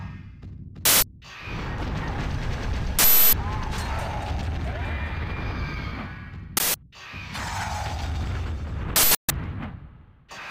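Loud bursts of digital noise hit at 0.85, 2.99, 6.57 and 8.96 s, each 0.17 or 0.34 s long. An uninitialised buffer played leftover memory, which fits 8192- and 16384-sample blocks.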